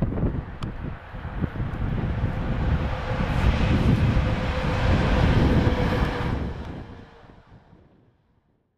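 No technical faults are present.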